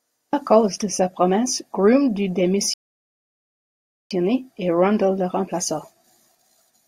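A rebuffering stall interrupts this speech recording from 2.74 to 4.11 s: playback drained its downloaded audio, fell silent while waiting for more data, then resumed exactly where it stopped, so nothing is lost but about 1.37 s of dead air is inserted.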